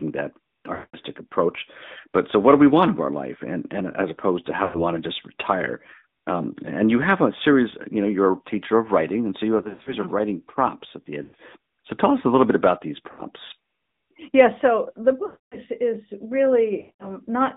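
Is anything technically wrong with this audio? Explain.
Yes. The speech has passed through an AMR narrowband mobile codec throughout. The line is limited to roughly 150 Hz to 3.7 kHz, and the voice has a plainly audible buzzy, synthetic edge. That comes from the vocal-tract model rebuilding speech from a few pulses per subframe, which fits a mode around 10 kbps.

Lost AMR speech frames occur at 0.74–0.97, 4.64–4.84, 9.58–9.95, 11.24–11.35, 13.12–13.22, 15.26–15.57 and 16.80–17.07 s. The decoder repeated the last good pitch and vocal-tract settings with falling gain, so each gap smears, drawn out and fading, before speech returns weak or rough.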